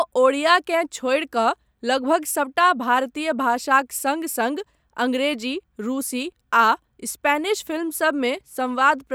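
No technical faults can be heard anywhere in this speech recording.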